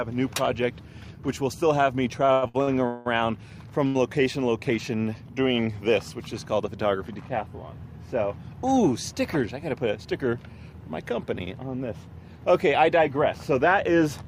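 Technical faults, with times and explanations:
2.25 to 3.07 s, repeated stalls (stutter): the jitter buffer kept running dry as packets came in late, so the receiver bridged five separate gaps by continuing the last sound, about 421 ms in all, roughly half of that stretch. The longest wait, 183 ms, is where the held sound fades. Nothing is lost; the audio simply drags in fits and starts. A single late-packet stall differs because it holds just once, not as a halting rhythm.
3.87 to 3.97 s, short stall from a late packet: one packet missed its playout time, the buffer emptied, and the receiver stretched the preceding sound for 74 ms until the packet turned up, then resumed exactly where it had stopped. The result is one sound held a touch too long with a faint buzzy or dipped texture, and playback ends up 74 ms later than before. Unlike the stutter just before it, this is a single isolated hold.
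9.77 to 10.20 s, jitter buffer speed-up: the buffer had accumulated more audio than its target, so the receiver trimmed many tiny slices, each a pitch period or a few, to shed roughly 70 ms of delay. Over this span playback runs at about 112% speed and sounds rushed, yet the pitch stays where it was. That unchanged pitch is what separates it from a sample-rate or resampling error, which would raise pitch along with speed.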